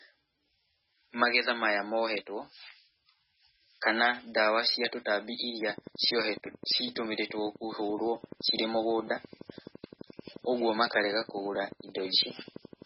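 Speech throughout, carrying heavy MP3 compression from start to finish. Nothing survives above 5.5 kHz, so sibilants and consonant detail are dulled. Weak spectral lines switching on and off between frames give the voice a watery, swirling texture with smeared onsets. The degree of damage fits a very low bitrate around 16 kbps, likely from an encoder starved of bits that cut the treble and zeroed quiet components. Starting at 5.62 s, right after "cia tũtambi", a train of clicks runs to 12.83 s. The pulses are evenly spaced at 11.8 per second, roughly a hundred in all. Each peaks around 5 dB above the surrounding signal, so the ticking sits clearly on top of the speech and persists through pauses. The near-identical shape and steady rate point to a likely source in electrical interference or a faulty connection or power supply injecting pulses into the path.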